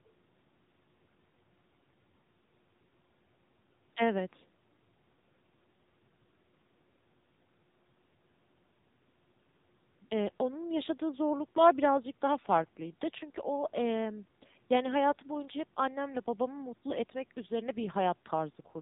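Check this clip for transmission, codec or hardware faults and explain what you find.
The speech shows one codec fault, present throughout.

AMR narrowband mobile codec: from start to end, nothing passes above about 3.8 kHz. The voice is rebuilt from a vocal-tract model fed by sparse pulses. The heavy damage, buzzy and synthetic, fits a low mode near 6.7 kbps.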